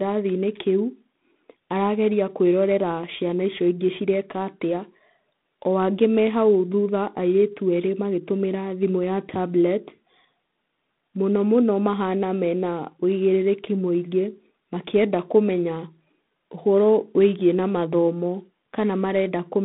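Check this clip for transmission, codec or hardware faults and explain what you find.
A harsh, rasping hiss rides on the speech throughout, swelling with its level, within a telephone band of 150 Hz to 3.6 kHz and nothing above 3.8 kHz. This is G.726 ADPCM, coding coarse differences from a prediction at what fits 24 kbit/s.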